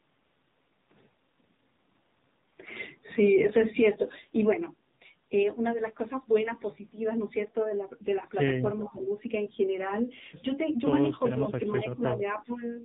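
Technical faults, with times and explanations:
Throughout: AMR narrowband mobile codec. Nothing above 4 kHz reaches the listener, so the speech sounds boxed-in and telephone-thin. The codec models the vocal tract and excites it with only a few pulses per 5 ms subframe. The buzzy, synthetic edge on every syllable fits one of the lower AMR-NB modes, around 7.4 kbps. At that rate the pulse budget is too small to carry natural voicing, and the damage is plainly audible.
8.78 to 9.07 s: echo leak. A faint, delayed copy of speech, about 20 dB below the main voice, arrives roughly 390 ms behind its original. It lasts only about three tenths of a second. This is likely the far end playing the call through a loudspeaker, with its echo canceller failing to remove everything its microphone picked up. The leftover was transmitted back down the line.
8.8 to 9.02 s and 11.26 to 11.49 s: speech suppressed in double talk. 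In each window the speech level sinks for about a fifth of a second. The first dip is deeper, around 10 dB. The second is milder, around 5 dB. The first dip overlaps the echo leak, which points to both sides talking at once. The echo canceller likely could not separate the local talker from loudspeaker echo, so it attenuated everything it heard.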